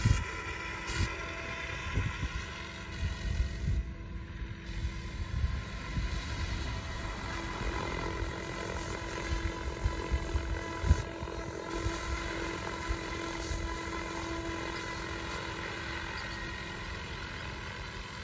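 No technical faults can be heard anywhere in this audio.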